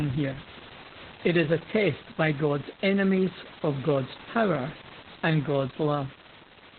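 Throughout the clip, Opus voice compression is running in its SILK speech mode at a very low rate, which fits a bitrate around 8 kbps. The coder has dropped to narrowband, so nothing above 4.4 kHz survives, and it codes the excitation coarsely. The speech sounds muffled and boxy, with a hoarse, slightly robotic edge. The room noise, about 16 dB below the speech, turns into a burbling wash.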